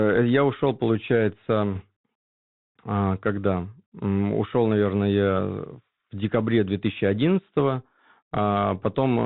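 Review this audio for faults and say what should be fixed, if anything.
The whole speech clip carries a Bluetooth CVSD headset codec sound. Nothing passes above 4 kHz, s sounds turn scratchy, and a granular hiss sits underneath, consistent with a 64 kbps CVSD link. A spectrogram shows a hard ceiling at 4 kHz with speckled noise below it. Prevent this by using a wideband headset codec such as mSBC, or by recording locally.

Bit errors on a Bluetooth voice link occur at 1.73 to 1.84 s and again at 7.59 to 7.61 s, at an error rate of about one or two percent and about one percent respectively. They add a rushing crackle without loud clicks, appearing as brief smeared bursts of noise below 4 kHz in the spectrogram and fuzzy thickening in the waveform. Prevent them with a stronger radio link, with less distance and interference.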